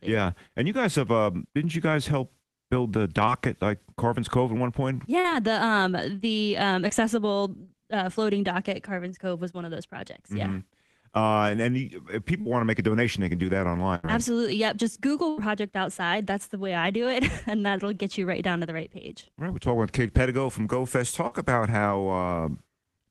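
The audio has dropouts consistent with a lossy network path. Short concealed packet loss at 3.25, 5.2, 6.88, 12.41 and 21.27 s, each replacing 20 to 40 ms, shows as brief smeared, frozen patches on a spectrogram, heard as smears or wobbles. Bursts of packet loss at 13.95 and 15.29 s each conceal about 80 ms: the waveform decays into a held buzz or fading hiss, then resumes with that stretch missing.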